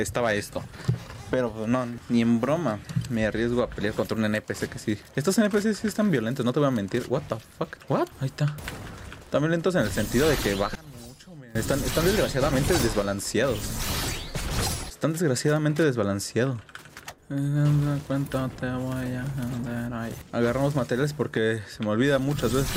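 From 10.75 to 11.55 s, one channel inverted in polarity is the likely cause: when the two channels are summed, whatever they share cancels. The sound falls by about 22 dB to a faint remnant of only their difference, then returns to full level.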